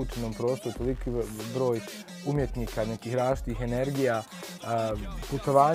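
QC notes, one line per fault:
No faults heard on review; nothing to log.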